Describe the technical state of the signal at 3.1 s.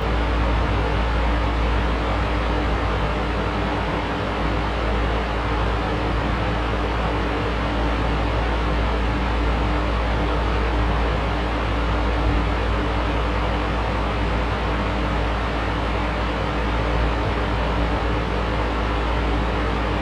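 At 3.1 s, channel delay (comb filtering) is present, as throughout the clip. One channel lags around 20 ms, so summing cuts evenly spaced notches from near 30 Hz. It sounds rough or slightly doubled.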